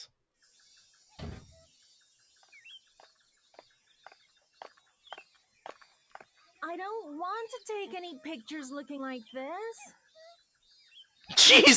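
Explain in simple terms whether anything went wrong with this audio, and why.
Nothing stood out on listening: the audio simply sounds like it came through a call's microphone processing, which trims away the very deepest bass, and that is normal.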